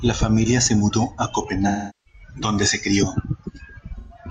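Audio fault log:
1.67–2.21 s, AAC frame loss with concealment: A 384 ms gap, fitting about nine lost frames. The decoder reuses the last spectrum, which smears and fades.
3.97–4.17 s, AAC frame loss with concealment: A 128 ms loss. Repeated old spectrum gives a brief smeared, noisy patch.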